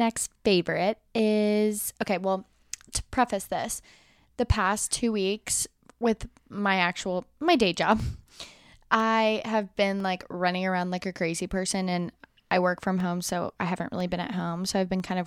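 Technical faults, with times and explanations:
1.98 to 15.0 s, periodic USB or driver dropouts: a brief gap of silence recurs once every second across this span, each losing well under a millisecond of the speech signal. Something in the system is likely stalling the USB bus or audio driver on a fixed one-second cycle, so the stream briefly stops and the missing samples are zero-filled. Each abrupt cut to silence and back produces a small tick, audible where speech is present.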